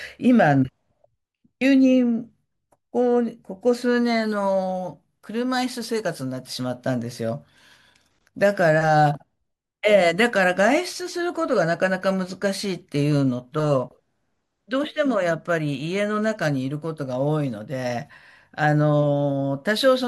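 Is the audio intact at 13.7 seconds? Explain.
No. At 13.7 seconds the speech carries clock slip clicks, a faint regular ticking that runs from 0.17 s to 19.95 s, about five times a second. The likely cause is two devices running on unmatched clocks, off by roughly 100 ppm, so one sample is dropped or repeated each time the drift adds up. On a spectrogram this shows as thin, evenly spaced vertical lines; zoomed in, the waveform has a tiny one-sample step at each slip.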